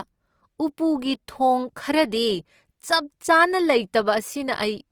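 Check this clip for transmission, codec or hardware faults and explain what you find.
One codec fault runs through the whole clip, and it is plainly audible.

Opus compression, throughout: the speech sounds rough and grainy because the encoder keeps each band's energy but fills starved bands with folded or noise content. That grain fits a bitrate around 24 kbps in music mode, likely Opus. The bandwidth stays full, up to 20.2 kHz, and there are few swirling spectral holes, which sets it apart from MP3.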